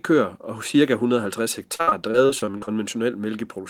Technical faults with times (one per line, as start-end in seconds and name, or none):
1.75-2.69 repeated packet loss (robotic sound)